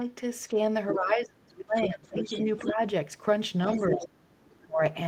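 Speech, with the other side's voice leaking through at 0.90–0.94, 1.79–2.72, 3.71–4.08 and 4.46–4.64 s, from faint to fairly close to the talker's level, likely residual loudspeaker echo the canceller missed. Speech is also suppressed in double talk at 0.94–2.47 s (dropping by around 30 dB), 2.66–2.80, 3.76–4.26 and 4.64–4.81 s, likely the canceller ducking both voices during overlap.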